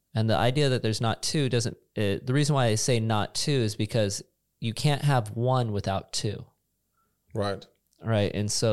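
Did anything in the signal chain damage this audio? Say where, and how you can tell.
No, nothing along the way seems to have done any damage here, and this recording of speech comes across just as it should with nothing to pin on any stage of the chain.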